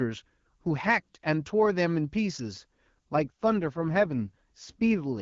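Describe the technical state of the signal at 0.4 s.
At 0.4 s the signal is intact, with the speech carried cleanly through the AMR wideband (HD Voice) codec and no dropout, distortion or other fault at that moment.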